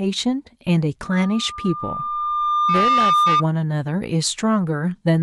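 At 1.03 s a loudspeaker feedback squeal starts up: a pure tone around 1.2 kHz that swells over a couple of seconds until it sits a little louder than the speech itself, then cuts out at 3.44 s. What's happening is the mic is hearing the speaker it feeds, and at that one frequency the loop gain tops unity, so the tone keeps reinforcing itself until the loop gets broken.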